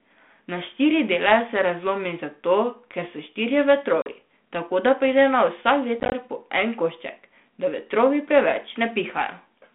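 At 4.02 s, between "zato ker so štirje" and "tako da pride na", the speech drops into a hard-edged silent hole of about 40 ms, a few packets' worth, then comes back with a brief roughness. A second burst from 6.00 to 6.13 s chops the sound into several short gaps, the longest about 20 ms. This is packet loss on an ADPCM call: the missing stretches became silence, and the decoder's adaptive predictor and step size lost track of the sender's, so each restart sounds off for a few tens of milliseconds.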